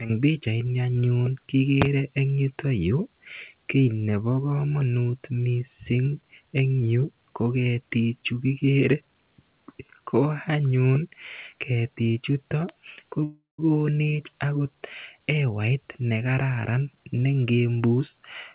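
At 13.24 s, right after "ketichutok ko", a call audio freeze sets in: the last sound trails on as a fading buzz or hiss, then goes silent for about 160 ms, likely because the jitter buffer ran empty. At 13.60 s the speech resumes where it stopped, roughly a third of a second late. Unlike packet loss, nothing is skipped. Throughout the clip, the call codec leaves nothing above 4 kHz.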